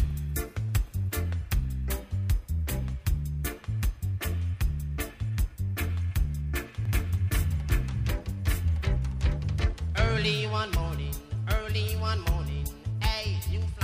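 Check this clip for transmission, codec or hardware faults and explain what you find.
One fault is present: a doubled audio track between 6.85 s and 10.33 s. Across that stretch a second full-band copy of the sound runs about one second behind the original, at roughly the same level. The trailing copy is dry, with no decay or room colouring, and it cuts in and out abruptly at the section's edges. The likely cause is the same signal being captured twice, once through a slower path, or an edit leaving two offset copies in the mix.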